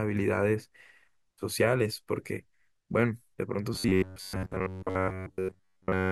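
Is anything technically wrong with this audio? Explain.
Yes. From 3.74 s to the end at 6.11 s, the speech turns into robotic sound from repeated short buffers: a rigid, metallic 93.8 Hz buzz that loosely follows the speech. The likely cause is audio arriving too seldom, so playback loops the last 10.7 ms segment in place of most of the real signal.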